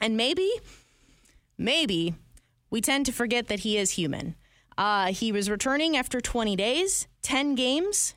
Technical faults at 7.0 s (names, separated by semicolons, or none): none